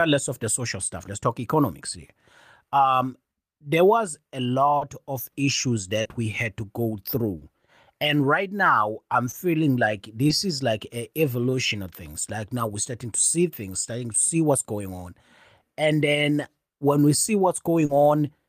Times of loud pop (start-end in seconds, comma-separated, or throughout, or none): none